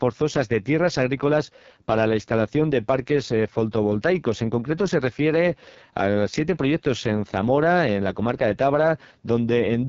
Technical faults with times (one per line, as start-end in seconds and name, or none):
0.00-9.89 AMR wideband (HD Voice) codec